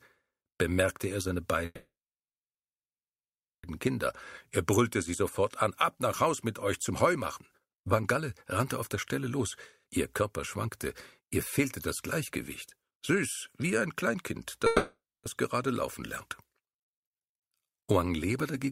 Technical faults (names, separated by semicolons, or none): call audio freeze; jitter buffer speed-up